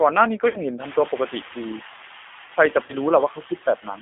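The whole clip passes through a G.729 codec, and the narrowband character points to G.729A at 8 kbit/s. The line band runs from 250 Hz to 3.5 kHz, so the speech has no low body and nothing above 3.5 kHz. The codec damage is plainly audible. Each 10 ms frame is rebuilt from a vocal tract filter, a pitch predictor and a sparse set of pulses, which leaves the speech rough and slightly synthetic.

Noise suppressor artifacts also run throughout. The suppressor lowers the bands it judges to be steady noise by only about 3 dB, frame by frame. The residue rises under the speech and sinks between phrases. The room noise steps up by about 24 dB at around 1 s, where it sits about 16 dB below the speech.

VoIP packet loss concealed by the speech codec occurs twice. From 0.48 to 0.58 s, 60 ms of audio is missing, which fits two lost packets. The decoder keeps extending its last pitch and filter at falling gain, so the sound is stretched into a buzzy tone or coloured noise that fades. 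Because each frame builds on the previous one, the speech stays weak for a short while after the gap. From 2.86 to 2.95 s, 30 ms is lost, consistent with a single packet. The same extrapolation and weak recovery follow, but shorter.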